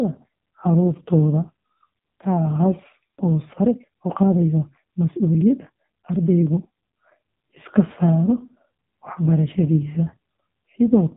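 From the first second to the last, the speech has been through the AMR narrowband mobile codec: nothing gets above 4 kHz, and heavy damage leaves the voice buzzy and synthetic, which fits the codec's lowest 4.75 kbps mode squeezing the vocal-tract model down to very few pulses.

From 3.57 s to 6.97 s there's a time-stretched section where the pace suddenly jumps to about 1.45 times speed while the pitch stays put. It sounds rushed, likely because software dropped short slices to shorten that stretch without shifting pitch.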